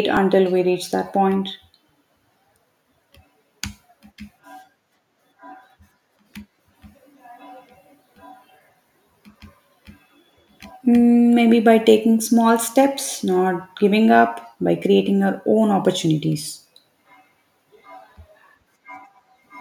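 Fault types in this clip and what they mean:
Periodic USB or driver dropouts: something stalls the USB or audio driver path every 2.0 s, skipping a couple of milliseconds of speech each time, with nothing filling the gap. About five evenly spaced ticks fall between 0.17 and 8.16 s.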